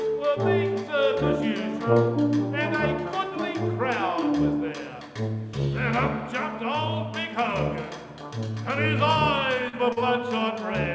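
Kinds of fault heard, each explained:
Short concealed packet loss: at 9.69 and 9.93 s, about 40 ms went missing and was rebuilt from the preceding sound, leaving smeared, repeated spectral bands and a blurred waveform.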